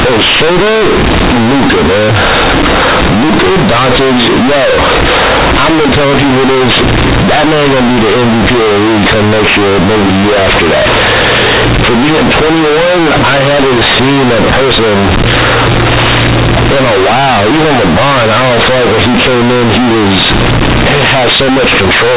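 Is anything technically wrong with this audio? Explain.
Yes. Throughout the speech, the companded audio is being read as linear. The mu-law bytes are played back as plain 8-bit samples without expansion, so every sign change swings the output across about half its range. Quiet passages come out as loud as peaks, producing harsh, buzzy distortion and heavy noise in pauses. The waveform looks like a near-constant, clipped-looking block with no level contour. The spectrogram shows broadband noise smeared across the band, which stops at 4 kHz as telephone audio does.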